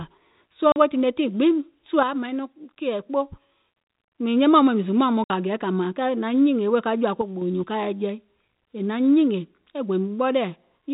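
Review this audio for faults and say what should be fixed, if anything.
Packet loss filled with silence cuts the speech at 0.72 s for 40 ms and at 5.24 s for 60 ms. These gaps fit two and three 20 ms packets and have hard edges. The waveform drops to silence; a spectrogram shows blank vertical bands. A larger jitter buffer with packet-loss concealment would prevent this.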